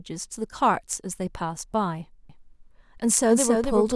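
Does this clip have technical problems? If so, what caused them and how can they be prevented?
Yes. From 2.29 s to the end, a doubled audio track appears: a second, full-band copy of the speech, around 5 dB quieter, trails the original by roughly 300 ms. It starts abruptly and carries no reverberant tail. On a spectrogram, every syllable's pattern repeats shifted right, and the waveform shows stacked, offset envelopes. The likely cause is the signal being captured twice, once through a slower path, so make sure only one input or routing feeds the mix.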